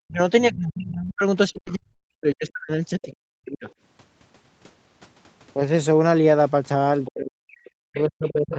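From the start to 3.67 s the talker's level sinks and breaks up, dropping by roughly 40 dB at its deepest across about three seconds. This is speech suppressed in double talk, likely because the echo canceller, unable to separate the talker from the loudspeaker echo while both sides spoke, turned everything down.

Within that stretch, from 1.05 to 2.06 s, the sound turns choppy and robotic. This is repeated packet loss: four gaps, the longest 100 ms, each patched by extending the preceding sound, leave about 18% of the span concealed rather than real.

From 2.58 to 2.61 s a brief smear marks a short concealed packet loss, where roughly 20 ms never arrived and the receiver continued the last sound to fill it. Overlapping it, from 2.59 to 2.61 s, comes a lost packet rebuilt from error correction. Opus played a low-bitrate copy carried in the following packet, so there is no silence, only a rougher, noisier 20 ms in audio already band-limited to 8 kHz.

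Faint scraps of a second voice appear at 3.02 to 3.06 s at about 20 dB below the talker, at 3.68 to 3.73 s at about 30 dB below, and at 7.05 to 7.10 s at about 20 dB below. This is the other side's voice leaking through, likely loudspeaker playback that the echo canceller failed to remove fully.

From 7.09 s to the end the talker is again pushed down by as much as about 40 dB, the same speech suppressed in double talk. Meanwhile, from 7.55 to 8.57 s, the other side's voice leaks through for a longer, stronger stretch, about 15 dB below the talker.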